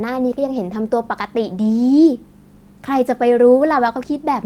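At 0.55 to 0.57 s there is a lost packet rebuilt from error correction. The 20 ms of rebuilt audio points to a single lost packet, with the following packet carrying a low-bitrate backup copy that the decoder played in its place. Nothing drops out. The speech simply turns briefly rougher and grainier. On the waveform the signal stays continuous with no flat gap, while a spectrogram shows a short, smeared, noisier patch where the fine detail coarsens.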